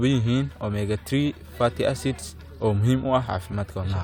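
Nothing in the speech stood out as a technical problem on listening.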